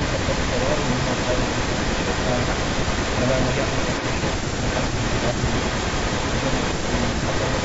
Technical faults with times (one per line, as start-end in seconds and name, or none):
0.00-4.36 echo leak
4.66-7.65 echo leak
5.33-5.37 speech suppressed in double talk